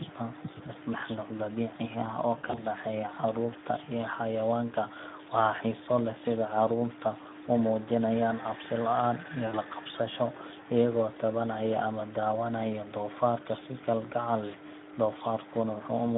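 Speex codec coding starves the excitation, which fits a rate near 11 kbps, so speech sounds hoarse and noisy throughout, confined to a 150 Hz to 3.7 kHz band. Packet loss concealed by the speech codec makes the decoder extrapolate fading, stretched sound at 2.37 to 2.67 s, just before "dhexeeya carruurta", then at 9.47 to 9.59 s and 14.47 to 14.51 s.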